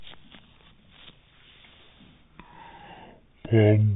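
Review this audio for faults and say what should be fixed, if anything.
A wrong sample rate runs through the whole clip. The speech plays at half speed and a full octave low, 12 semitones down. That fits 48 kHz audio played back at 24 kHz without conversion. To prevent it, match the playback rate to the file's rate or resample before output.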